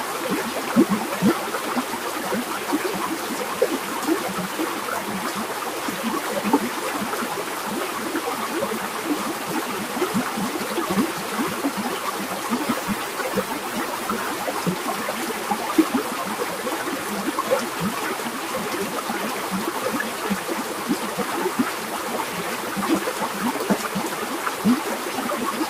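A noise suppressor built for speech was left running on this recording of everyday sounds, so throughout it treats steady tones, ambience and reverberant tails as noise and pulls them down by around 5 dB, letting onsets through while sustained parts and decays sink, which makes the sound pump and thin out. From 12.58 to 14.53 s a call bitrate drop forces the encoder to code far more coarsely, and the change in quality fits a fall from about 96 kbps to roughly 18 kbps, held at its lowest for 1.89 s. The sound turns rough and muffled with the top end cut away, then recovers.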